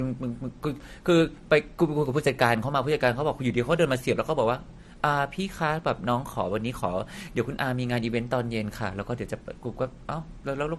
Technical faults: transcoding between lossy codecs

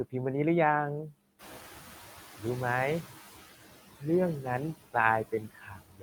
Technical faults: noise suppressor artifacts; speech cut by the noise suppressor; noise suppressor catching up

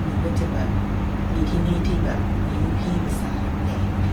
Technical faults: adaptive stream at a lower bitrate

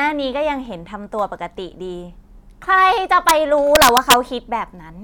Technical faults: integer overflow

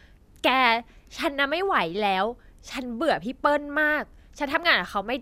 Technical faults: none

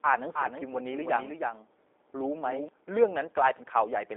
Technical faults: G.729 codec

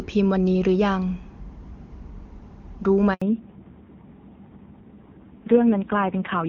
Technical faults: handover gap; fallback to narrowband

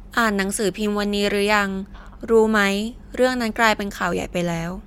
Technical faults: none

